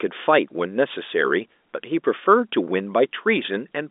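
No faults can be heard anywhere in this speech. The G.711 telephone coding leaves the familiar narrow line sound, with nothing above about 3.8 kHz and the low end thinning out below roughly 250 Hz.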